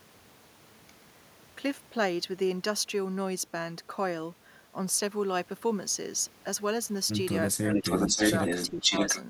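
From 7.57 to 7.85 s the speech drops sharply, by a deep margin, for about a fifth of a second. This is likely speech suppressed in double talk. The echo canceller could not tell the talker from the far-end echo, so it turned both down.

An echo leak starts at 7.69 s and runs to 9.23 s. A copy of the speech returns 581 ms late, a little louder than the speech itself. The loudspeaker side's echo canceller likely failed to remove what its microphone caught from the loudspeaker.

From 8.70 to 8.91 s the speech dips again, only slightly this time, for about a tenth of a second. This second case of double-talk suppression likely comes from the same cause.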